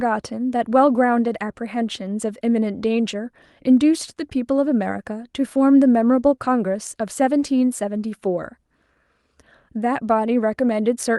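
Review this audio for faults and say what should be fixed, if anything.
Nothing here needs fixing, as the speech comes through the call path just the way it's meant to.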